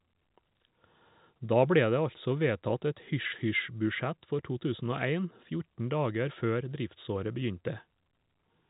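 No technical faults can be heard anywhere in the speech. The G.711 telephone coding, here A-law at 64 kbps, leaves nothing above about 3.8 kHz, with at most a faint quantisation hiss that rises and falls with the level.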